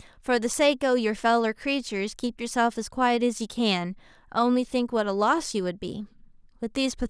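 No technical faults are audible.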